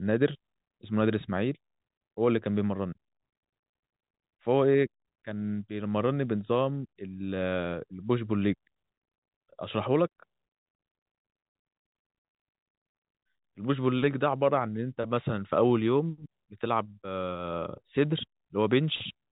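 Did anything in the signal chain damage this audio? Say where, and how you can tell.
No, nothing in the chain damaged this speech; what you hear is the ordinary G.711 telephone coding, with nothing above about 3.8 kHz, which fits the standard 64 kbps mu-law format.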